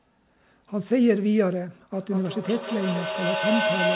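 From 1.94 s to the end, a feedback echo between two devices appears: a second device replays the sound and the first microphone recaptures it. Repeats return roughly every fifth of a second, thinning and ringing, and build to about 1 dB above the speech instead of decaying.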